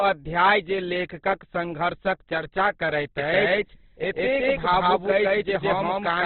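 From the very start the whole clip sounds boxed in and grainy, with nothing above about 4.4 kHz and heavy codec damage that turns tones rough and noisy. That is likely Opus compression in its music mode, which fits a low bitrate around 12 kbps.

Right after "चर्चा करैत", at 3.18 s, a doubled audio track cuts in abruptly and runs to the end. A second copy, roughly as loud as the first, trails by something like 150 ms with no decay or room colour, likely from a second capture or an out-of-step edit.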